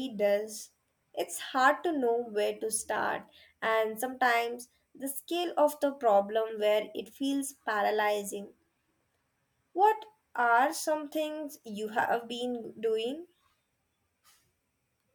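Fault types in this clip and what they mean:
Nothing stood out on listening to this recording.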